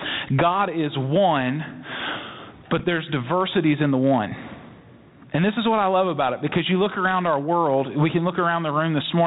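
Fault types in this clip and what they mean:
Gain pumping: Likely excessive input gain, with a fast limiter clamping each loud syllable; the gain swings by roughly 20 dB.
Bit errors on an ADPCM link: Flipped bits derail the decoder's step size and predictor, leaving a rough pop from 2.77 to 2.82 s, just before "there's diversities in the".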